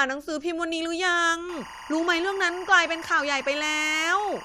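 From 1.49 s to the end at 4.44 s, timecode bleed sits under the speech: linear timecode leaking in from an adjacent track or cable. Its square wave flips between roughly 1 and 2 kHz, which fits 24 fps code, giving a steady chirping warble roughly 15 dB below the voice.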